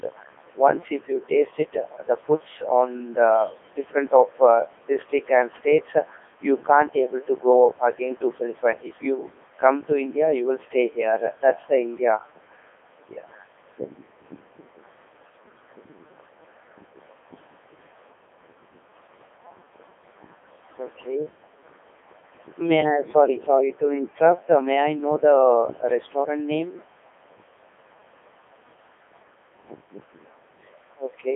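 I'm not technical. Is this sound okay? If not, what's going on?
No. From start to finish the speech sounds robotic and buzzy, like a radio voice, with nothing above 3.7 kHz. That is the Codec 2 vocoder: it sends only a rough outline of the voice and rebuilds it from simple tones.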